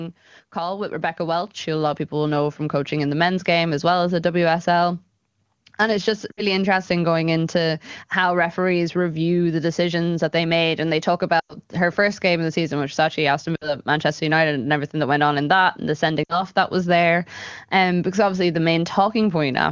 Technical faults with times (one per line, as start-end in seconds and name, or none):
0.53-3.00 automatic gain rising
6.31-6.42 lost AMR speech frames
11.39-11.54 lost AMR speech frames
13.55-13.77 lost AMR speech frames
16.24-16.42 lost AMR speech frames